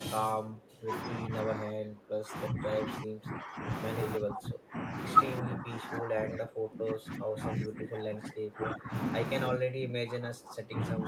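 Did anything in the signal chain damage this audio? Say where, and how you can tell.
Yes. The speech repeatedly sinks, thins out and breaks into fragments, with drops reaching roughly 20 to 25 dB, across four stretches: 0.0 to 3.71 s, 4.17 to 4.95 s, 5.41 to 8.94 s, and 9.5 s to the end. The stage is call processing, most likely speech suppressed in double talk. The echo canceller, unable to separate this talker from loudspeaker echo while the far side spoke, attenuated everything.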